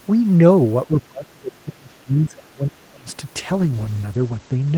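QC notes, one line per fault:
0.87–3.07 s, speech suppressed in double talk: the echo canceller most likely could not tell the near talker apart from the far side's loudspeaker echo while both spoke, so it attenuated everything. The speech dips by up to about 25 dB, with roughly two seconds affected.
3.38–4.77 s, call bitrate drop: the encoder's rate fell from 32 to 12 kbps, bottoming out for 1.03 s, and its audio bandwidth narrowed from 20 kHz to 8 kHz. The coarser coding makes the speech sound rougher and duller to the end.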